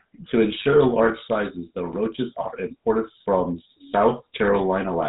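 A buzzy, gravelly roughness and a dull top end with nothing above 4 kHz run through the whole speech clip. This is GSM full-rate codec damage, plainly audible and consistent with about 13 kbps: vocal-tract modelling driven by sparse regular pulses produces the grain.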